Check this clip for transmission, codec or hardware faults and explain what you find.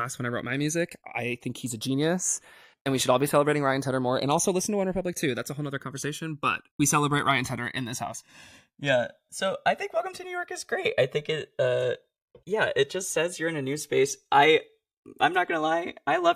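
One hardware fault runs through the whole speech clip: the channels drift apart. The two channels were captured on separately clocked devices about 200 ppm apart, so their offset grows steadily to roughly 3 ms by the end. In mono, comb notches sweep slowly, heard as gradual flanging. Unlike a fixed inter-channel delay, the coloration keeps moving, and it slides one way only instead of oscillating like a flanger effect.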